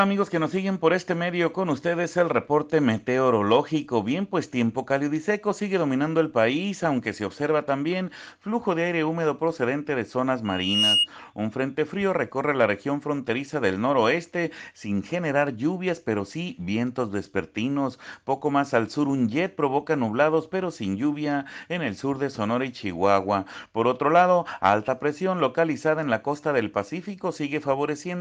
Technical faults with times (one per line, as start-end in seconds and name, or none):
10.45-11.08 loudspeaker feedback squeal